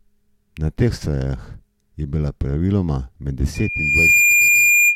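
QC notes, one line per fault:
3.54–4.95 s, loudspeaker feedback squeal: a 2.4 kHz tone swells over roughly 0.7 s to about 10 dB above the speech, as the mic-to-speaker loop runs away.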